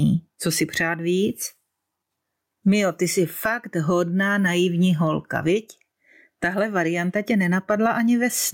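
Gain pumping runs through the whole speech clip. The gain is pulled down on loud syllables, swinging roughly 15 dB. Likely cause: excessive input gain with a fast limiter.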